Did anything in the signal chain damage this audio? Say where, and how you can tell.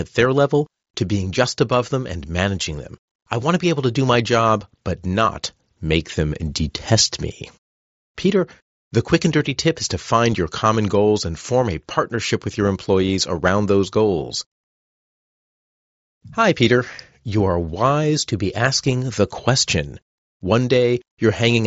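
No, nothing damaged it.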